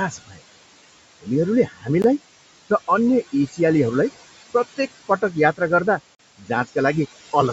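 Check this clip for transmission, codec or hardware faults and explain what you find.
Three kinds of fault turn up in the speech: constant noise suppressor artifacts, four places where the suppressor clips the speech itself, and two brief dropouts that point to a Bluetooth stall.

Noise suppressor artifacts run through the whole clip. The background noise drops away between phrases and swells back underneath them. The suppressor pulls down the bands it judges to be steady noise, by about 20 dB, frame by frame, so the room noise pumps along with the speech.

Speech cut by the noise suppressor occurs at 0.11–0.39 s, 1.67–1.88 s, 3.33–3.59 s (just after "र अन्य") and 6.38–6.50 s. Each time the speech goes suddenly faint or swallowed, dipping by about 15 to 17 dB. The suppressor mistook soft speech energy for noise and turned it down along with the background.

The Bluetooth stall appears as two sudden gaps, a very short one at 2.02 s of about 18 ms and a longer one at 6.15–6.19 s of about 43 ms. 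The sound cuts to silence and then resumes. The likely cause is interference delaying packets until the headphone buffer ran empty, so playback paused until the resent data arrived.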